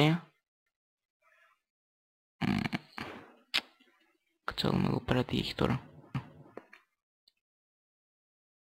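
At 6.14 s, a CD skip: the laser jumped spiral turns. A brief mute shows as a thin vertical gap, then the sound resumes elsewhere.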